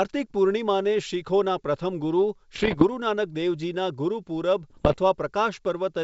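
Speech carried over G.722 wideband coding has two bursts of bit errors on an ADPCM link, at 2.54–2.84 s and 4.70–4.98 s. Flipped bits, on the order of one to two percent, throw off the decoder's step size and predictor, producing pops and rough, level-jumping noise.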